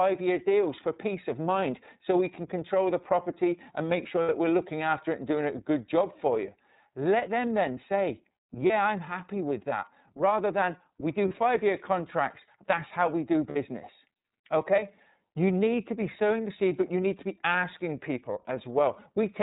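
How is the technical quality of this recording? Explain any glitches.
The quality is clearly limited. It's narrowband speech with audible codec coloration and four brief dropouts patched over by the decoder.

The iLBC codec runs throughout. Everything above 4 kHz is gone, so the speech sounds muffled and telephone-like, and there's a plainly audible rough, slightly synthetic edge. That comes from iLBC coding each frame's excitation on its own, without help from the previous frame. The timing of the artefacts fits its 30 ms frame mode at 13.33 kbps.

Then there are the lost iLBC frames, at 4.23–4.29 s, 8.66–8.71 s, 11.28–11.32 s and 13.49–13.56 s. The first and last gaps are about 60 ms each, which fits two lost frames. The middle two are about 30 ms, so one frame each. In each gap the decoder repeats the last pitch cycle with some noise mixed in, and you hear a short held, faintly buzzy vowel. 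Because iLBC frames are independent, the speech snaps back right afterwards.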